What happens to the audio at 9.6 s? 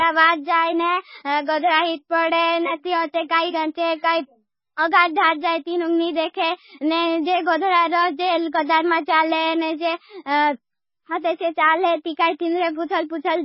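Heavy MP3 compression, likely bit-starved, runs throughout. At 9.6 s nothing is heard above 5.5 kHz, and flickering weak frequencies leave the speech dull and watery.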